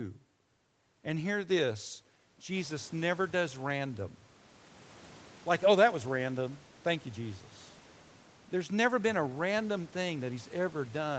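Speech over a call path with no faults, band-limited to 8 kHz as a wideband call codec and microphone processing would leave it, with the room's background noise stepping up by about 14 dB a couple of seconds in yet staying about 28 dB below the voice.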